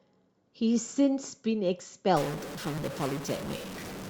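At 1.79 s, an overlap between stream segments makes the player discard a few milliseconds of speech where two segment time stamps collide, so the waveform jumps and a tiny skip is heard. Segments here run about 1.0 s long. From 2.17 s to the end, a stuck bit is the likely cause of the distortion that coats the speech, with noise filling the quieter gaps. At 2.78 s, a second segment overlap cuts another brief slice, producing another tiny skip.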